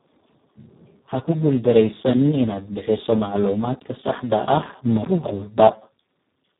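Speex codec damage runs through the whole clip, from start to finish. The CELP coder here has almost no bits for the excitation signal, so it rebuilds the speech from a coarse model rather than the real waveform. The result is heavily degraded: noisy, hoarse and edging toward robotic, which fits a very low setting of around 4 kbps. Nothing is present above 3.8 kHz, leaving the speech dull and narrowband.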